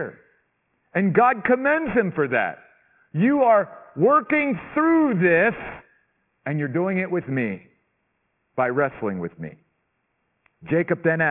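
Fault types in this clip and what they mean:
Aliasing: the speech was brought down to a low sample rate, which points to about 6 kHz, with no anti-alias filter, so content above 3 kHz folds back as false tones. Sibilants turn gritty and metallic, with folded energy roughly 20 dB below the signal throughout.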